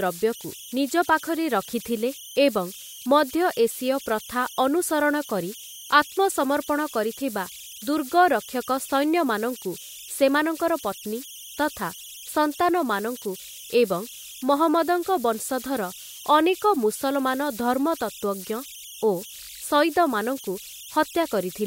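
A whistle sits around 3 kHz for the whole clip, most exposed in the pauses between phrases, with a grainy, gritty texture beneath the quieter passages of speech, at about 18 dB below the signal. These are converter idle tones: a delta-sigma converter running without dither locks into repeating bit patterns whenever its input is small, and those cycles produce audible tones whose pitch follows the input's offset.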